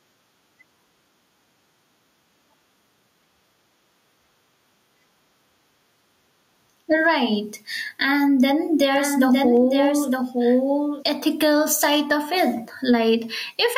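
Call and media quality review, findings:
Gain pumping, whole clip. Swing around 10 dB. Levels squashed together. Likely cause: input gain set far too high, with a fast limiter or compressor clamping every peak.

Doubled audio track, 8.97 to 11.03 s, ending just before "ethical side of it". Full-band copy trails by about one second, roughly 10 dB quieter. No decay, no room colour, abrupt start and stop. Likely a second, slower capture path mixed in.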